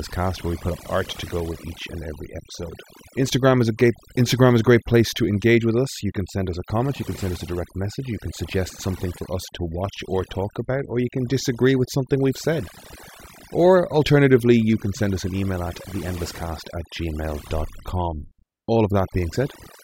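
Throughout the speech, the background between phrases drops to near silence dotted with twinkling, chirpy specks. This is overdone noise removal: a noise reduction process was set too aggressively on a noisy recording, so any frequency band sitting close to its noise estimate gets pushed far down or switched off, taking the quieter parts of the voice along with the noise.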